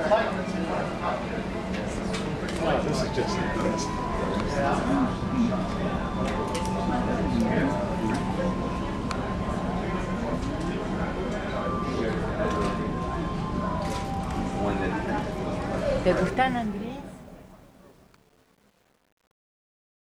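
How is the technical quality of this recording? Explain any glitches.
The recording has one audible glitch, at the very end. From 16.21 s to the close of the clip the fade-out turns gritty instead of dying away cleanly, and from 16.85 s onward it is at its roughest. This is truncation distortion on a fade. The volume stage keeps too few bits and adds no dither. As the level drops toward the smallest available step, the waveform collapses into a handful of square steps, which fits processing at about 9 bits.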